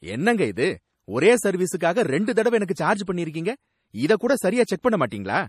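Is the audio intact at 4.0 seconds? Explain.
No. At 4.0 seconds the speech carries the same damage heard across the whole recording: a watery, swirling quality, with s sounds turning metallic and consonant onsets smeared, and nothing above 15 kHz. This is likely MP3 compression at a low bitrate, which fits roughly 40 kbps. Starved of bits, the encoder cuts the treble at a fixed point and drops weak spectral lines that flicker on and off between frames.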